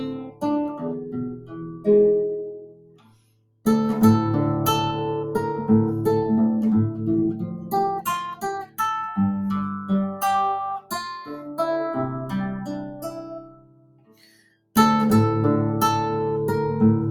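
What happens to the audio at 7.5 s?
A speech-tuned noise suppressor is running on this non-speech audio. It misreads sustained tones, ambience and reverb as noise and pulls them down, with gain swinging by around 20 dB. Held sounds and tails sink while attacks pass, so the sound pumps and thins.

Around 7.5 s the sound is cut by the noise suppressor. From 7.39 to 7.73 s it judged the material to be noise and attenuated it harder than its surroundings, with a deepest drop of about 9 dB. The sustained part sags and its decay is clipped short.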